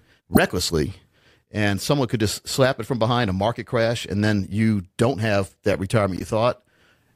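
At 0.33 to 0.39 s, a corrupt frame decoded: damaged bits in a couple of compressed frames were played anyway, putting energy at the wrong frequencies. It bursts out about 15 dB stronger than the later one. After "don't have that retirement", 6.17 to 6.22 s brings a quieter blip.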